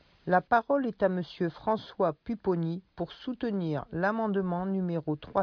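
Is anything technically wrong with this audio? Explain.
No, nothing in this speech recording stood out as a technical problem on listening.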